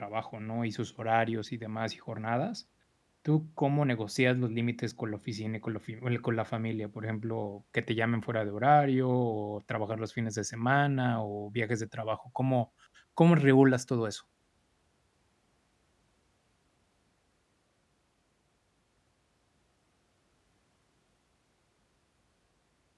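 No faults detected anywhere in the speech recording.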